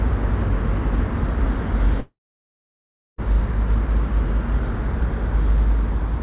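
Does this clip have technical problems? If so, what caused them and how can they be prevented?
Yes. From 2.0 to 3.2 s the sound turns into a brief fading buzz, then about 1.05 s of silence, and resumes with roughly 1.2 s simply gone. This is likely a long network dropout, where the receiver stretched the last audio before giving up. A steadier network connection, or a larger jitter buffer with redundancy, would prevent it. The call path cuts everything above 4 kHz, which fits a 64 kbps G.711 codec.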